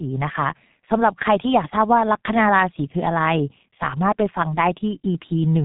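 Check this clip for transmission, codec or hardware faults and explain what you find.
One codec fault runs through the whole speech clip.

G.723.1 codec, throughout: the 30 ms frames and a sluggishly updated voice model, at a rate that fits about 6 kbit/s, discard everything above 3.8 kHz and smear transitions. The speech comes out heavily muffled and hoarse, with consonants blurred.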